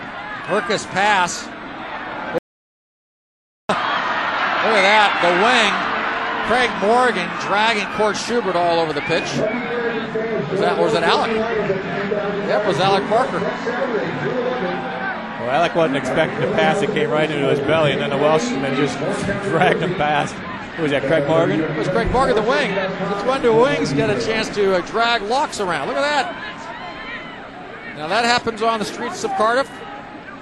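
At 2.38 s the sound stops abruptly and stays gone until 3.69 s, about 1.31 s later: an audio dropout to silence. The input was likely lost for that stretch while recording continued, so silence was written. Unlike a noise gate or a fade, the cut is instant in both directions and the gap holds silence with no room tone or hiss, and whatever sounded during it is simply missing.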